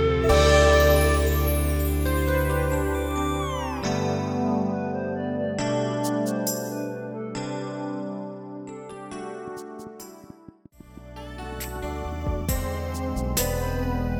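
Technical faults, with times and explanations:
8.92–14.02 s, train of clicks: some 40 irregular pops, seven per second, near the sound's level, likely interference; thin vertical spectrogram lines, waveform spikes.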